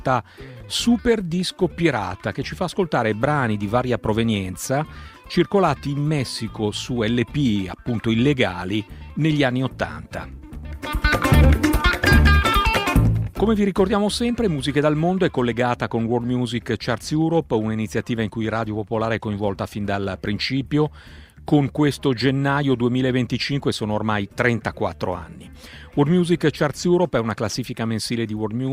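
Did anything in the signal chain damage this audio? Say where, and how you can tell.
No, there's no damage audible at any stage of the chain, from capture through to playback.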